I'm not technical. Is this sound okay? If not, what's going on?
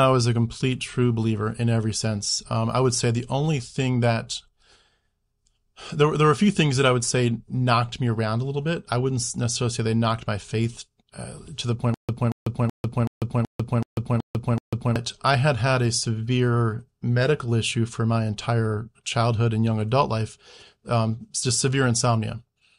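No. From 11.94 to 14.96 s the speech stutters: the same quarter-second snippet repeats eight times, each followed by a brief dead silence, roughly every 0.38 s. This stutter with silent gaps likely comes from playback stalling and replaying its last piece, so the speech from that stretch is lost.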